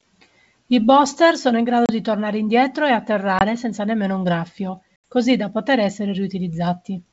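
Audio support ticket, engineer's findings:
Packet loss on the ADPCM call at 1.86–1.91 s, 3.39–3.43 s and 5.04 s (30, 20 and 80 ms lost). Hard-edged flat gaps on the waveform, then slightly distorted speech as the decoder's predictor resyncs.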